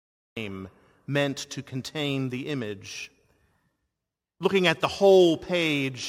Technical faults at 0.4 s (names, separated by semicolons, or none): cut-off start